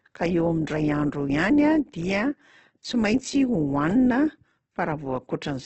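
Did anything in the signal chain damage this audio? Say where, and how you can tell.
Yes. Opus compression across the whole clip, at the codec stage: the speech turns rough and grainy, with nothing above 8.2 kHz. This points to the likely cause, a low-rate Opus encode around 12 kbps that fills starved bands with folded or noisy energy instead of leaving holes.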